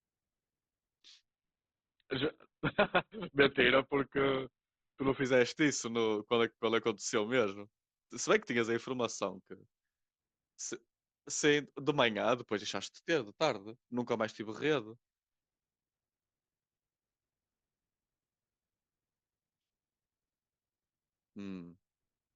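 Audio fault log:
1.25 to 5.25 s: adaptive stream at a lower bitrate. The speech suddenly loses its treble, with nothing above 4.4 kHz, and codec artefacts rise. There is no gap. The stream dropped to a cheaper version, which fits about 12 kbit/s Opus, then recovered.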